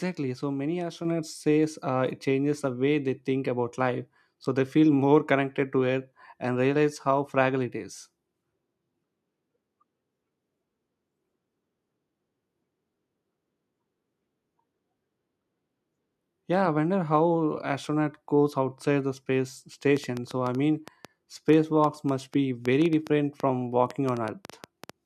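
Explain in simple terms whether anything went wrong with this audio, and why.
Microphone volume stepped up, at 1.05 s, just before "says uh it changes": the calling software judged the microphone too quiet and turned its input level up in a single jump, so the voice and the background noise behind it suddenly get louder together.

A train of clicks runs from 19.97 to 24.91 s, starting right after "goes outside the space": about thirty similar ticks at an uneven pace of roughly five or six per second, poking out above the speech and the gaps alike, likely from electrical interference or a faulty connection or power supply.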